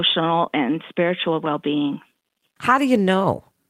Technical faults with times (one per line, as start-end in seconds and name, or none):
none